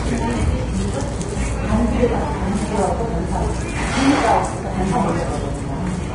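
Throughout, the sound is grainy and hissy below a hard ceiling near 10.6 kHz, with roughened tones and blurred attacks: likely heavy Vorbis compression, consistent with about 32 kbps. Noisy treble, not swirly pre-echo, distinguishes it from MP3.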